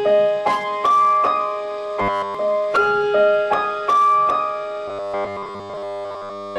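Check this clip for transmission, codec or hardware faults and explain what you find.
There is one fault, robotic sound from repeated short buffers, heard from 2.02 to 2.35 s and again from 4.88 s to the end at 6.58 s. In both stretches the sound becomes a rigid, metallic 100 Hz buzz that only roughly tracks what it replaces. The likely cause is that fresh audio arrived too seldom, so the player looped the last 10 ms or so, nearly all the time. Unlike mains hum, the buzz appears only where the sound content is lost.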